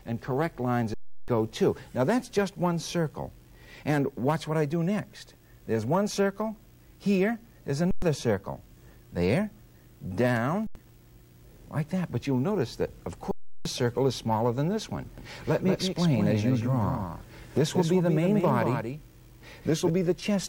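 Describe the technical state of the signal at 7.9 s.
Underrun with held sample, 7.91 to 8.02 s: the buffer empties, the last value holds flat for 112 ms, and about 100 ms of audio is lost.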